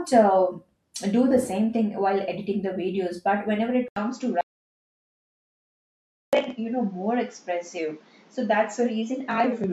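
At 3.88 s the recording likely switched its input to a poorer device. This input switched to a poorer device leaves an 80 ms gap, after which nothing above 7.6 kHz survives. The speech turns dull and boxy, with new background noise roughly 30 dB down and little change in level, through to the end.

From 4.41 to 6.33 s the input was likely lost while the recorder kept writing silence. This audio dropout to silence removes 1.92 s of speech entirely. The sound cuts off mid-flow into dead silence, with no room tone, then resumes abruptly.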